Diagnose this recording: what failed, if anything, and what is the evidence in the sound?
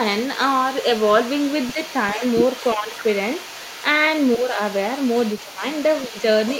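Other side's voice leaking through, 0 to 6.6 s: a faint second voice sits about 20 dB under the speech, likely residual echo that call processing's echo canceller left.

Speech suppressed in double talk at 2.15, 2.75, 4.37, 5.43 and 6.09 s: brief dips, deepest near 15 dB at 5.43 s, likely the canceller ducking overlapping talk.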